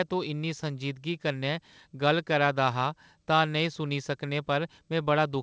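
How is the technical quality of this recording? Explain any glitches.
No glitches or faults heard.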